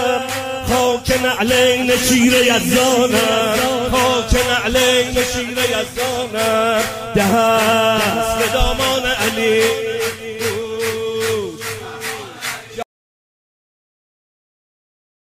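The sound runs normally until 12.83 s, then cuts off abruptly mid-flow and falls into total silence that lasts the final 2.4 seconds to the end of the clip. There is no fade and no residual room tone, so this is an audio dropout to silence. The likely cause is that the input signal was lost, through a disconnected device, a broken link or an accidental mute, while the recorder kept writing empty samples.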